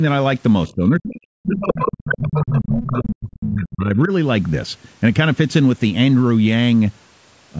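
From 0.68 to 4.12 s the talker's speech dips and breaks up, falling by roughly 40 dB at its deepest for about three seconds in all. This is speech suppressed in double talk, likely the echo canceller turning everything down while both sides spoke at once.

Within that stretch, a second voice intrudes: a very faint scrap from 0.69 to 0.74 s, then much louder passages from 1.48 to 2.20 s and from 2.37 to 3.14 s, close to the talker's own level. This is the other side's voice leaking through, likely loudspeaker echo the canceller failed to remove.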